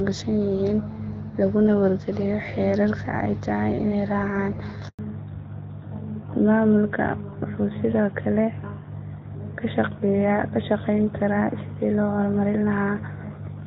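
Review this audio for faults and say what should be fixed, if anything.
A handover gap cut the speech stream while the call switched networks, silencing the audio for 100 ms from 4.89 to 4.99 s, right after "inay raacaan".

A fallback to narrowband followed at 4.99 s and lasts to the end. The call dropped from wideband HD Voice to an older narrowband codec, so nothing above 4 kHz survives and the speech turns duller and rougher. The sound before the drop fits AMR-WB at 12.65 kbit/s, and after it fits AMR-NB at 12.2 kbit/s.

To prevent both, the network should keep wideband codec support across the handover and prepare the new link before releasing the old one.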